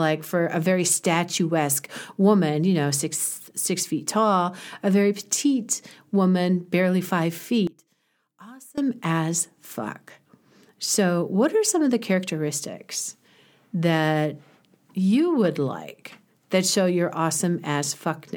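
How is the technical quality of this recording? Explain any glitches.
The recording has one clear glitch in the speech. From 7.67 to 8.78 s, between "petite woman barely five" and "as fuck", the voice drops by about 23 dB to a faint copy. The likely cause is one channel inverted: reversed polarity in one stereo channel cancels the centred voice when the channels are summed to mono, leaving only a faint difference signal.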